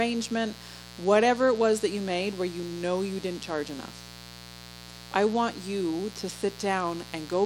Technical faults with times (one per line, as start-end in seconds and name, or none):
0.00-7.46 mains buzz